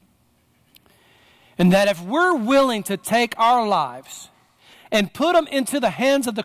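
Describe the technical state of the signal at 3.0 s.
At 3.0 s the signal is intact, with no audible technical fault at that moment.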